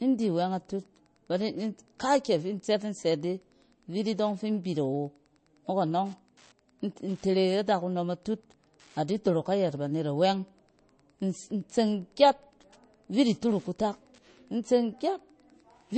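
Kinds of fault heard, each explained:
Wi-Fi interference: Present throughout the speech as a faint, steady ticking, roughly 40 dB below the voice, repeating every 102.4 ms, or close to ten times a second. A nearby Wi-Fi radio's beacon transmissions are being picked up and rectified by the audio circuitry, so each beacon lands as a small click. The strict regularity of the ticks gives it away as radio pickup rather than anything acoustic in the room.
MP3 compression: Heard throughout, with plainly audible damage. Nothing survives above 8.3 kHz, so the speech sounds dull and band-limited, and the weaker detail has a watery, swirling quality as parts of the spectrum drop in and out from frame to frame. This is likely heavy MP3 encoding. The encoder, short of bits, has cut the treble at a fixed point and discarded quieter frequency content, which points to a low bitrate of around 37 kbps.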